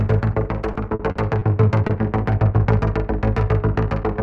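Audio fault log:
0.73–1.43 s: repeated packet loss (robotic sound). Four separate dropouts, the longest 40 ms, together about 120 ms or 17% of the span. Each gap is filled by extending the preceding sound before the next loss arrives, so the passage turns choppy.
1.87–1.91 s: short concealed packet loss. About 20 ms of audio failed to arrive in time and was synthesised from the signal just before it, then crossfaded back into the real audio. The patch is audible as a brief smear or wobble.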